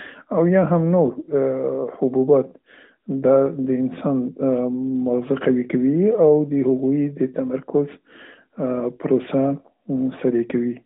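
No faults are audible in this speech: it carries the band-limited, lightly coded sound of an AMR-NB narrowband mobile path, consistent with the 12.2 kbps mode, with a line band of roughly 200 Hz to 3.6 kHz and nothing above 3.8 kHz.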